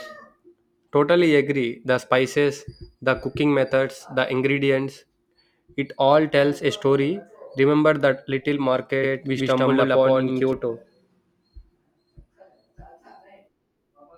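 Doubled audio track, 9.03 to 10.53 s: a dry copy of the speech trails by about 100 ms at similar level, likely from a slower second capture.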